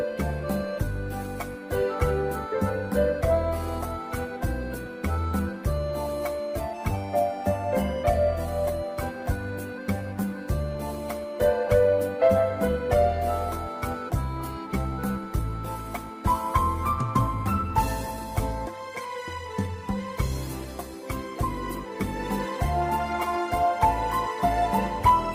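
Nothing in the audio stood out as a technical problem on listening.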